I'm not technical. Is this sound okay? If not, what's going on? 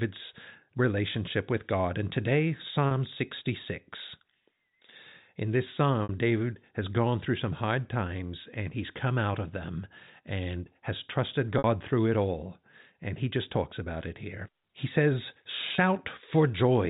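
No. Four brief hiccups at 2.88, 6.03, 11.58 (between "them and has trusted" and "through it all") and 15.75 s come from packet loss with pitch repetition. Small pieces of the call went missing, and the receiver covered each gap by repeating the last sliver of sound for about 30 ms or 60 ms. Unlike a plain dropout, the shorter gaps at 2.88 and 15.75 s aren't silent; they sound like a brief, held buzz, while the longer ones at 6.03 and 11.58 s fade into silence before the speech returns. The telephone-quality sound of G.711 telephone coding is not a fault.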